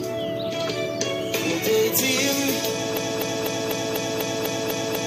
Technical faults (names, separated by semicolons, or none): broken-record loop